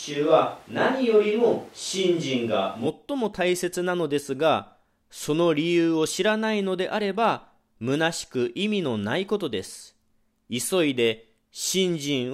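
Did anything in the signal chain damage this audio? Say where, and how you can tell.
Yes, at the capture end, ahead of the analogue wiring. From the first moment until 2.86 s the speech sounds roomy and hollow, thinner in the bass, with background noise sitting roughly 30 dB below it. At 2.86 s it snaps back to a close, full sound at about the same loudness. This is likely a switch to a distant microphone, used while the close one dropped out. Added reverb or a filter would not change room noise and tone together in one abrupt step.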